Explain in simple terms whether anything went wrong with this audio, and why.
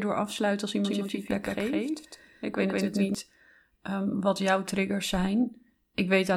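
From 0.85 to 3.15 s there's a doubled audio track: an equally loud copy lags roughly 150 ms behind, likely from a second capture. Unlike an echo, it never fades.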